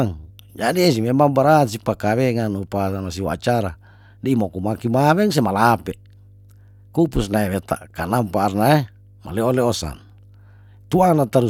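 Mains hum runs under the speech from start to finish: a steady 50 Hz tone sitting roughly 30 dB below the signal, likely from a ground loop or nearby transformer. Unlike broadband rumble, it holds one fixed pitch with low harmonics and never drifts.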